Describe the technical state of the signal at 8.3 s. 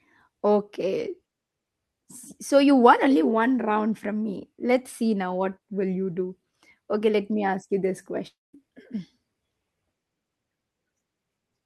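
At 8.3 s the speech falls inside a long network dropout, from 8.27 to 8.55 s. The last sound is stretched into a fading buzz that sinks to near silence, and speech resumes with about 260 ms missing, likely because packets stopped arriving and the receiver filled the gap.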